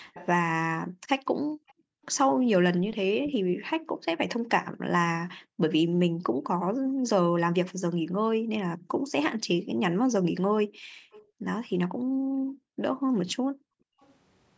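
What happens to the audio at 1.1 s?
The echo canceller likely let part of the loudspeaker pickup through, so from 0.14 to 1.73 s an echo leak adds a faint copy of the speech, delayed about 0.45 s and roughly 20 dB down. The echo canceller is also clamping the microphone, so background gated by the echo canceller makes the room sound dip by as much as about 40 dB. These dips occur between 0.86 and 14.0 s and add up to around four seconds.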